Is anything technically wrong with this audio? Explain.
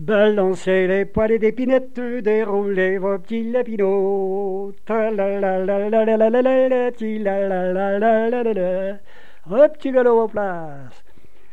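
Yes. Throughout the clip there is a DC offset of about -30 dBFS. It is inaudible as such, showing only as a steady component at 0 Hz. The whole waveform sits displaced from zero by a constant amount, wasting headroom and leaving it off-centre.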